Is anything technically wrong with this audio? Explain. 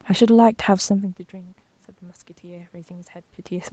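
Yes. From 2.4 s to the end of the clip, the speech and the background noise swell up together over more than a second. The whole signal gets louder, not just the voice. This is automatic gain rising. The input level dropped by about 24 dB, and the automatic gain control responded by raising its gain step by step to compensate. Because it amplifies everything it receives, the room noise comes up in lockstep with the speech.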